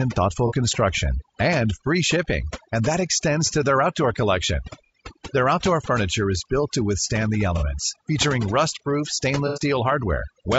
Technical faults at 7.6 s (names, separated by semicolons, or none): overdone noise removal; low-delay AAC compression; AAC frame loss with concealment